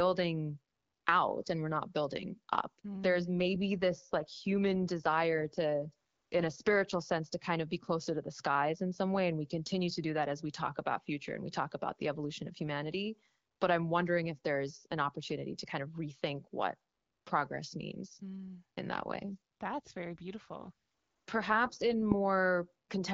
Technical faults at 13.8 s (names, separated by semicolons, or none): none